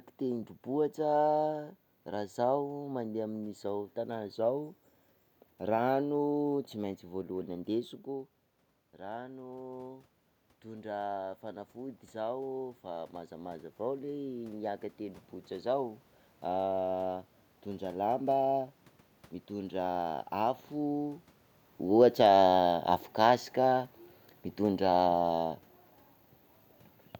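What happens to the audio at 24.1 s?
At 24.1 s the level is sinking because of automatic gain falling, which runs from 21.84 s to 25.49 s. The gain control judged the input too loud or its background noise too strong, and pulled its gain down gradually, by about 4 dB over that span. The speech and the room noise behind it drop together, which separates this from the talker moving relative to the microphone shortly before, where only the voice changes.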